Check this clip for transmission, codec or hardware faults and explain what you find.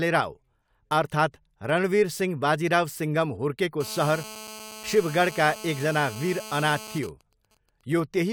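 Two interference faults from a nearby 2G handset affect this speech recording.

GSM phone buzz, 3.81 to 6.99 s, starting after "रणवीर सिंह बाजिराव सिङ्घम": an active call's radio pulses at 217 Hz are rectified by the audio circuit, adding a harsh, harmonic-rich buzz about 16 dB below the speech.

GSM signalling bursts, 7.03 to 8.17 s: with the call's talker silent, the phone transmits only short burst groups, which are rectified into even ticks with a longer 217 Hz buzz twice a second, roughly 25 dB down.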